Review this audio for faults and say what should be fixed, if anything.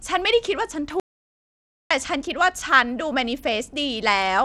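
Bluetooth SBC compression, throughout: The speech carries a plainly audible codec texture. The top end thins and flickers in and out, and a gritty, aliased grain sits on the voice. This likely comes from SBC encoding with a small bit pool. Its few sub-bands get starved of bits, so the upper bands drop out while the rest is coarsely quantised. The damage fits a low rate of around 96 kbps. To prevent it, record over a wired or higher-quality link, or raise the SBC bit pool.

Audio dropout to silence, 1.00 to 1.91 s: The speech cuts off abruptly and returns about 0.91 s later. The gap is silent with no room tone, so whatever was said there is lost. The likely cause is that the input was interrupted, through a failed link, a disconnected device or a brief mute, while the recorder kept writing silence. To prevent it, stabilise the connection and monitor the input level while recording.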